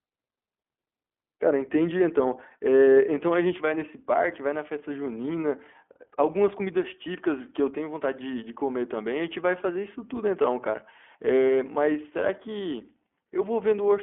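From start to finish this speech has gone through the iLBC codec. Everything above about 3.6 kHz is gone, and each 20 ms frame is coded on its own, leaving a plainly rough, synthetic edge.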